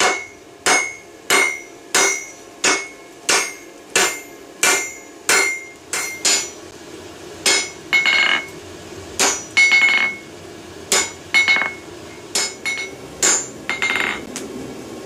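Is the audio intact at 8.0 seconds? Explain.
Yes, the audio at 8.0 seconds is intact, with no dropout, click, distortion or other fault to be heard at that moment.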